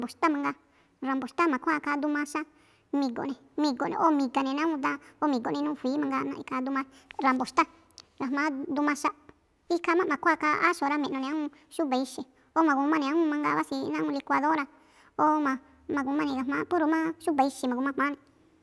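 Throughout, the speech shows a wrong sample rate: tempo and pitch both rise together, 1.5 times faster and 7 semitones higher, which fits 16 kHz audio played at 24 kHz.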